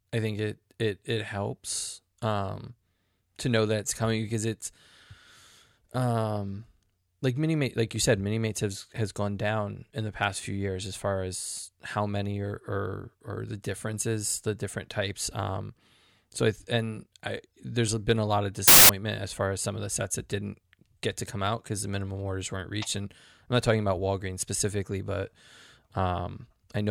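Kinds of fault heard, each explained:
Samples built from the wrong bytes: the reader misassembled each sample's bytes, so the rapidly varying low-order bits became the dominant part of the value. In this speech clip that bursts out as loud, harsh broadband noise from 18.68 to 18.89 s, between "been a lot of" and "as far as some".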